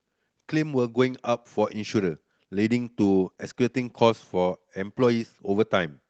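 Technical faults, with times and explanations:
3.02–4.69 s, call bitrate drop: the speech turns grainy, watery and muffled as the Opus encoder is squeezed onto fewer bits, which fits a fall from about 32 to 16 kbps, held at the lowest rate for about 1.6 s. Coarser coding roughens the texture, and the coded band shrinks from 12 kHz to 8 kHz. On a spectrogram, energy above 8 kHz vanishes in a flat-topped band and the rest looks blotchier.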